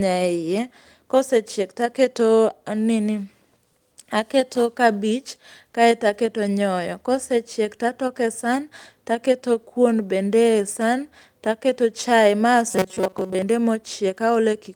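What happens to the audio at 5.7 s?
A short concealed packet loss hits at 5.71 to 5.75 s: about 20 ms of audio arrived too late for the decoder, so the receiver extrapolated the preceding sound to fill the gap and blended back. Between "aketo kabich" and "kaeto aketo nyoyo" it leaves a brief smear or wobble.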